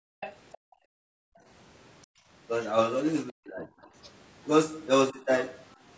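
From 0.0 to 0.2 s the echo canceller clamps the microphone while its loudspeaker plays, so this is background gated by the echo canceller. The room sound falls away by up to about 40 dB, then returns when the suppression releases.

At 0.2 to 0.35 s and again at 0.52 to 0.58 s, a second voice sits underneath, first at about 15 dB below the speech and then at about 25 dB below. This is the other side's voice leaking through, likely residual loudspeaker echo the canceller failed to subtract from the microphone signal.

The gating returns from 0.58 to 1.46 s and from 2.06 to 2.29 s, each time pulling the background down by up to about 40 dB before it comes back.

From 3.31 to 3.88 s and again at 5.11 to 5.28 s, the talker's speech dips, by roughly 25 dB and then roughly 15 dB. This is speech suppressed in double talk, likely the canceller attenuating everything while both ends spoke at once.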